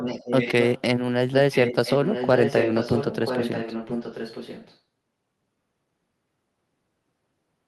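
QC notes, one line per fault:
0.00–0.81 s, echo leak: a copy of the speech returns about 1 s late, only slightly quieter. The far end's echo canceller likely failed to remove its loudspeaker pickup.
1.31–4.77 s, echo leak: the same roughly 1 s delayed copy returns, a little below the speech. This is likely incomplete echo cancellation on the far end's loudspeaker.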